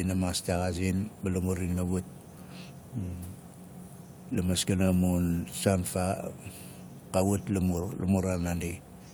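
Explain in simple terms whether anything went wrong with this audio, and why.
Nothing went wrong with this speech recording; no technical fault can be heard anywhere in it.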